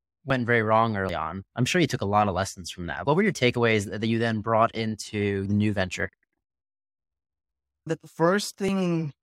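Small jumps forward in the speech land at 0.30, 1.09, 3.55, 5.46 and 8.68 s. Each skips about 20 ms, except 1.09 s, which loses closer to 70 ms. Likely dropped buffers (overrun): unread audio was overwritten and the two sides were spliced together.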